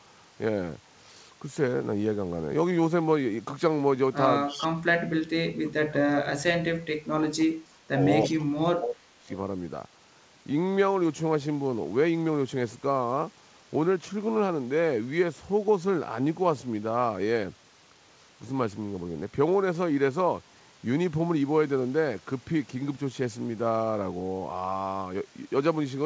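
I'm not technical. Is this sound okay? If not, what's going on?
No, there are two problems, and both look like the usual trouble with a call where someone is on speakerphone.

The first is an echo leak. Around 4.48 to 4.67 seconds, and again from 8.22 to 8.37 seconds, you can hear a faint copy of the voice arriving about a third of a second late. It's quiet and only lasts a moment. The likely cause is that the far end's loudspeaker got picked up by their microphone and their echo canceller didn't scrub it all out, so a bit came back down the line.

The second is speech suppressed in double talk. The voice drops away almost completely for short stretches: briefly at 4.55 to 4.73 seconds, then for longer from 5.11 to 6.61, 7.15 to 8.0, and 8.29 to 9.3 seconds. That likely means the echo canceller couldn't tell the real talker apart from the echo, so it turned everything down to be safe.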